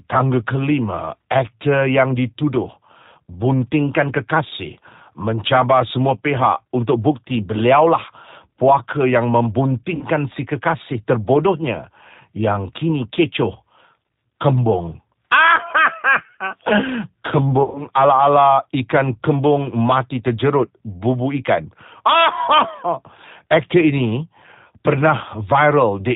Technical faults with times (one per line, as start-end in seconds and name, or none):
0.00-26.16 G.729 codec
9.95-10.04 VoIP packet loss concealed by the speech codec
17.63-17.87 VoIP packet loss concealed by the speech codec